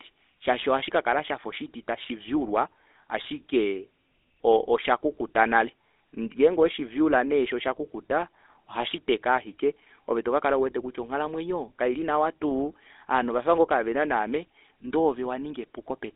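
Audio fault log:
Throughout: GSM full-rate codec. The speech has a buzzy, gravelly roughness and a boxed-in, telephone-like thinness, with clearly audible damage. Nothing comes through above about 3.8 kHz, and the low end is thin too, with the band sitting roughly between 300 Hz and 3.6 kHz. The codec models the vocal tract as a filter and drives it with a coarse, evenly spaced pulse excitation at about 13 kbps. The fine detail that coarse excitation throws away is what comes out as the grainy buzz.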